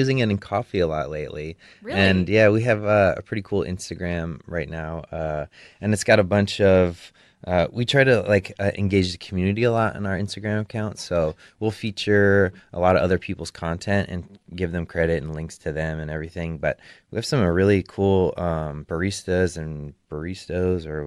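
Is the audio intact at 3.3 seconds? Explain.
Yes, the audio is intact at 3.3 seconds, with no dropout, click, distortion or other fault heard at that moment.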